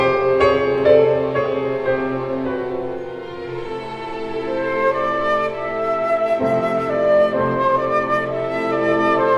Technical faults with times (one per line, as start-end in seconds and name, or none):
6.04-8.53 call bitrate drop